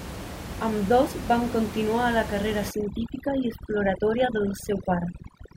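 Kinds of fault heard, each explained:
Overdone noise removal: from about 2.71 s to the end at 5.57 s, a noise reduction stage is working far too aggressively against room noise that sits only about 10 dB below the speech. Frequency bands that drift close to its noise estimate are pulled down hard or muted outright. The background collapses to near silence with scattered twinkling artefacts, and the softer components of the speech are stripped away with it.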